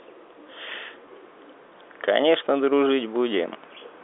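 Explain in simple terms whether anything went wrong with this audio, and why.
At 1.06 s, about 10 ms of this speech went missing in transit, which fits a single lost packet. This packet loss with pitch repetition was patched by replaying the last vocal cycle, giving a tiny held buzz within the narrow G.711 telephone coding sound.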